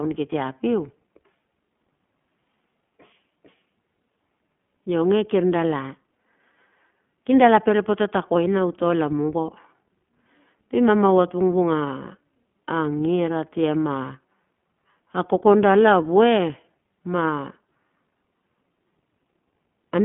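iLBC codec coding runs through the whole speech clip, with each 20 ms frame coded independently, which fits the 15.2 kbps mode. The band sits near 150 Hz to 3.4 kHz with nothing above 3.7 kHz, so the sound is muffled, with plainly audible rough, synthetic graininess.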